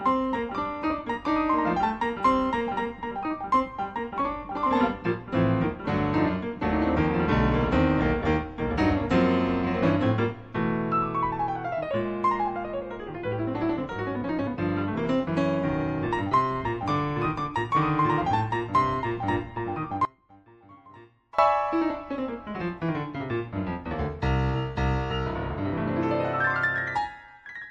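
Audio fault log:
20.05–21.39 s, one channel inverted: one stereo channel has likely had its polarity reversed, so summing to mono cancels everything the two channels share. For about 1.3 s the sound drops by about 24 dB, leaving only a faint residue of their difference.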